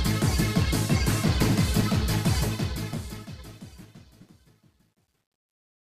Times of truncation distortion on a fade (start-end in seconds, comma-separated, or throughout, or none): 2.37-5.91